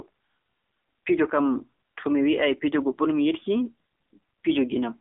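From start to finish the speech has been carried through the AMR narrowband mobile codec, the 2G and 3G phone speech coder, and at a low rate: the damage points to roughly 7.4 kbps. The coder rebuilds each 20 ms frame from a vocal-tract model and a handful of pulses, so the speech comes out plainly buzzy and synthetic. The line band runs only from about 250 Hz to 3.5 kHz, leaving it thin and boxy with no top end.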